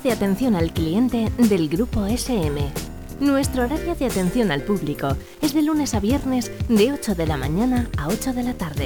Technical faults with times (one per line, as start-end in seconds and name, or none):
6.32-8.85 sample clock jitter